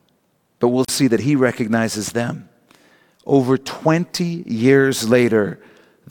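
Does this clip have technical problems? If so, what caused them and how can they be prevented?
Yes, there's a gap at a join of encoded pieces from 0.85 to 0.88 s, a gap of about 37 ms between "but we'll" and "see that he recognizes". The pieces were encoded separately, and each one's leading encoder delay and padded final frame got left in, so the speech just stops briefly and then resumes. To prevent it, trim that delay and padding when joining, or encode the audio in one continuous pass.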